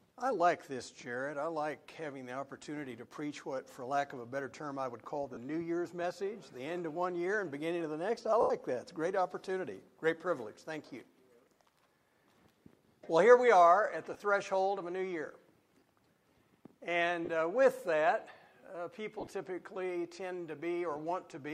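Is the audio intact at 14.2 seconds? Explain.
No. From 14.14 to 14.22 s the sound briefly turns into a noisy, hissy smear. These are lost LE Audio frames: about 40 ms went missing in short gaps of up to roughly 20 ms, which fits four 10 ms LC3 frames. The decoder filled each gap by repeating the previous spectrum with randomised signs.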